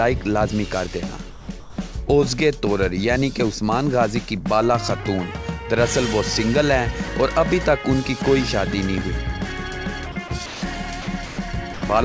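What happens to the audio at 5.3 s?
Nothing goes wrong at 5.3 s: the audio runs on intact, with no dropout, glitch or distortion at that moment.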